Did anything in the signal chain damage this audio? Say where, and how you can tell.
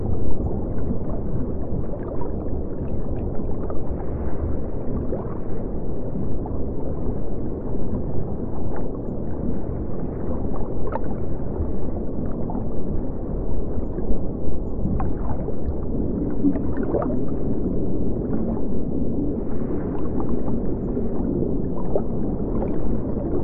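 No, nothing in the chain audibly damaged this audio, and no stage shows any evidence of trouble.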